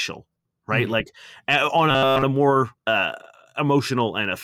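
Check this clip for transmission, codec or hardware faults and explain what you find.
One fault. From 1.91 to 2.22 s, just before "a more uh", there's robotic sound from repeated short buffers: a rigid, metallic 134 Hz buzz throughout, likely from a roughly 7.5 ms chunk looping while real audio was starved.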